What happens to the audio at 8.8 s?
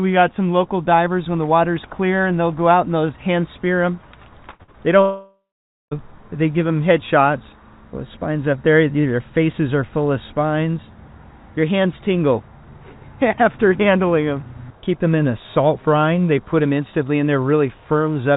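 Nothing goes wrong at 8.8 s: the audio stays intact there, carried through the call path with the narrow band of a telephone codec and nothing audible above about 4 kHz.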